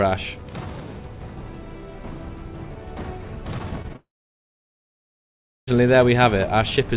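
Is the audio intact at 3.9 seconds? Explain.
No. Around 3.9 s the sound smears and wobbles in three brief patches, at 3.82 to 3.86 s, 3.88 to 3.91 s and 3.93 to 3.96 s. This is short concealed packet loss: roughly 20 ms of audio went missing each time, and the receiver covered each gap by extending the preceding sound before blending back.

From 3.96 s the sound gives way to a fading continuation and then near-silence for about 1.6 s, returning only at 5.69 s with that stretch absent. This is likely a long network dropout, where no audio arrived and the concealment could only fade out.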